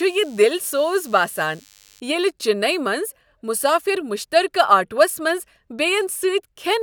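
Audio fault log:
0.0–2.0 s, DECT cordless phone buzz: a thin, steady buzz at 100 Hz with many harmonics sits roughly 30 dB below the speech. A nearby DECT handset or base sends a radio burst every 10 ms, and the audio circuitry rectifies each burst into a click train.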